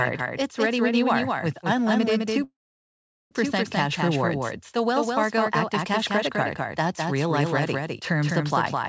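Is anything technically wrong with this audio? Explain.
Yes, there are two faults.

Throughout the speech, a doubled audio track is audible: a second full-band copy trails the original by roughly 200 ms at about 5 dB lower, with no decay or room colour. This is likely a second capture through a slower path or an edit holding two offset copies, and it sounds like a hard slapback echo.

From 2.44 to 3.34 s, just after "you are with unlimited", there is a call audio freeze. The last sound is stretched into a fading buzz or hiss and then silence for most of the roughly 0.87 s gap. Speech then resumes where it stopped, so nothing is lost, but everything after runs about 0.87 s late. The likely cause is delayed packets emptying the jitter buffer.

The call path shows nothing above 8 kHz, which fits G.722 at 64 kbps.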